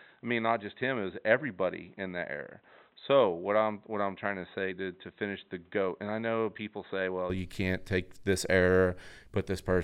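From the start until 7.3 s the speech sounds dull and boxy, with nothing above 4 kHz, a few decibels quieter and carrying faint background noise, then opens up abruptly with no gap. This is likely an input switched to a poorer device, then back.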